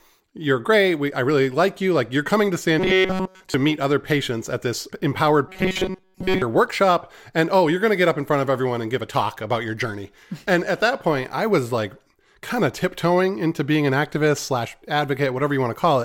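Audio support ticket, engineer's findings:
Robotic sound from repeated short buffers, 2.80–3.54 s, ending just before "meet other patients at". Rigid metallic buzz at 188 Hz throughout. Likely audio underrun, with the output looping a roughly 5.3 ms block in place of missing data.

Same fault, 5.48–6.42 s, right after "patients at this empowered". Same 188 Hz buzz over most of the span. Likely the same starved buffer repeating its last chunk while real audio is skipped.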